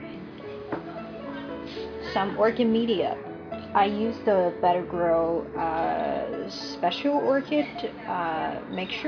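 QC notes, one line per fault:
No faults detected.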